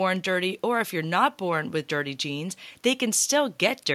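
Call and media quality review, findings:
No technical faults found in the speech signal under review; level, continuity and timing hold steady throughout the capture.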